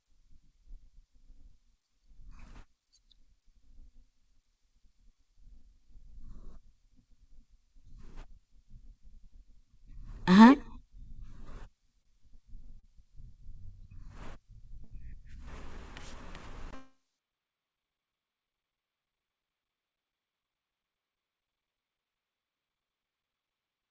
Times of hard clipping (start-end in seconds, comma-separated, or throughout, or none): none